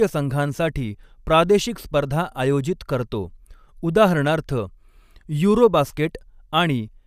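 No technical faults can be heard anywhere in the recording. Nothing in the chain from capture to playback stands out as having gone wrong.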